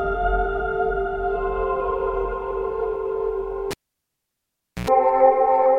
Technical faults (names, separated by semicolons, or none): cable pulled and plugged in